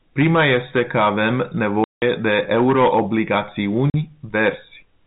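Right after "este că avem", the speech drops into dead silence from 1.84 to 2.02 s, and again from 3.90 to 3.94 s, each gap with hard edges. This is packet loss filled with silence: lost packets replaced by nothing, with gap lengths fitting 20 ms packets, heard through a telephone-band G.711 path.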